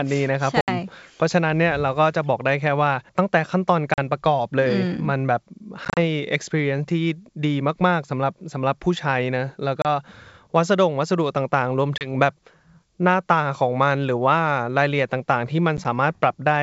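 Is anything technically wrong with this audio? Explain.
Yes. The speech suffers from packet loss on an ADPCM call, carried over G.722 wideband telephone coding, which fits 64 kbit/s and adds at most a faint upper-band hiss. Dropouts occur at 0.61 to 0.69 s (70 ms), 3.94 to 3.99 s (40 ms), 5.85 to 5.99 s (80 ms in short gaps, longest 30 ms), 9.82 to 9.86 s (30 ms), 11.98 to 12.11 s (30 ms) and 15.77 to 15.86 s (20 ms scattered, longest 10 ms). Lost packets become silence, and the receiving decoder's adaptive predictor and step size drift from the sender's, so the speech comes back with brief distortion before resettling. A waveform shows flat, sharp-edged gaps followed by a misshapen burst. A spectrogram shows blank vertical strips.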